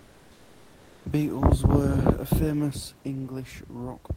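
Right from the start, up to about 1.05 s, the background is comfort noise in place of the real room sound. The room noise, roughly 34 dB under the speech, loses its texture and becomes a smooth, featureless hiss sitting about 31 dB below the loud parts and about 2 dB quieter than what follows. That's likely discontinuous transmission, with the sender going quiet during the pause and the receiver filling the gap with synthetic noise shaped like the background.

At about 2.71 s, one channel drops out and stays gone through to the end. Once the two sides are folded to mono, everything common to both channels steps down abruptly by about 6 dB and is otherwise unchanged. The likely cause is one stereo channel being lost somewhere in the path rather than anything in the recording.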